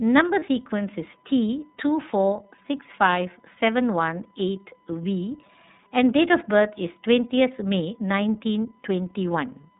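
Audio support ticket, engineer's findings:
USB whine throughout. Steady fixed-pitch tone at 1 kHz, about 40 dB below the speech. Probable component: USB audio interface or its power path. Mechanism: the bus draws current in 1 ms frames, and that ripple leaks in through power or ground.

iLBC codec throughout. Band-limited, nothing above 4 kHz. Speech is rough and slightly synthetic, with plainly audible coding damage. Component: narrowband VoIP link. Sound fits the 30 ms, 13.33 kbps iLBC mode. Each frame's excitation is coded on its own.

Lost iLBC frames at 0.39 to 0.44 s. Brief held, buzzy vowel-like sound in place of speech. Fits one lost 30 ms packet. The decoder repeated the last pitch cycle with added noise. Speech recovers immediately, since iLBC frames stand alone.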